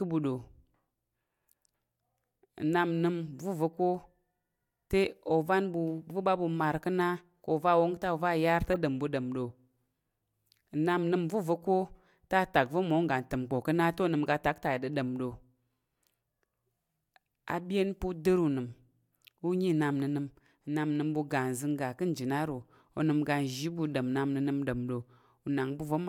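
A speech clip with one corrupt frame decoded, from 8.73 to 8.76 s between "yar te" and "ɗom ɓu ɗom ɗo": damaged bits in a couple of compressed frames were played anyway, spraying misplaced energy into a short squeaky blip peaking around -25 dBFS.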